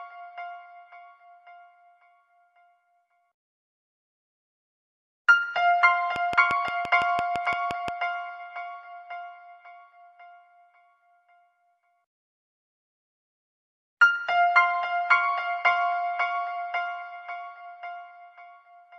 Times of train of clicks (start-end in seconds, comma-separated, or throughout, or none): 6.16-7.89